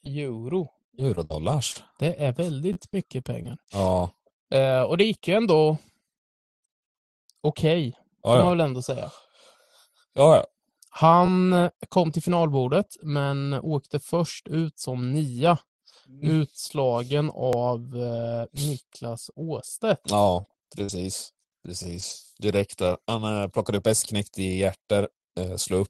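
From 1.15 to 3.46 s the speech has scattered short gaps: a handful of lost or late packets, each no longer than about 50 ms, patched by continuing the preceding sound. They come through as brief ticks and smears. On a spectrogram they show as thin smeared columns where the harmonics stretch flat.

Within that stretch, at 2.73 to 2.76 s, a repeated buffer occurs. New audio arrived late and an 11.61 ms block was replayed, sounding three extra times. That fits a 512-sample buffer. It is heard as a short buzz. In the waveform it shows as identical short cycles with hard joins. At 17.53 s an 11.61 ms block plays once more, giving a single click.

From 20.42 to 22.12 s there is repeated packet loss with robotic sound. Holes follow one another closely, about 200 ms missing in all and the longest 43 ms, so 12% of the span is concealed by extended sound. The result is choppy, with pieces missing. 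The spectrogram shows repeated frozen, smeared slices, all sitting below the Opus call path's 12 kHz cut-off.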